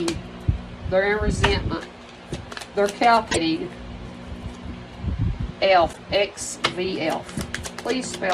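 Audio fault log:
3.28–3.38 s and 5.89–5.99 s: damaged data in a compressed stream. Corrupted bytes make the decoder misread or reject frames, lose sync and hunt for the next frame header, producing a brief chirp, squawk, click or short hole lasting about 0.1 s each time.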